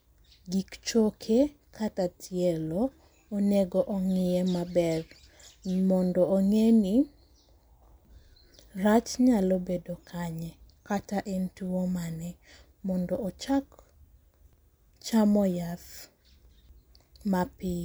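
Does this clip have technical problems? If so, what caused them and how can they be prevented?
No, this clip has no technical problems, so there is nothing to prevent.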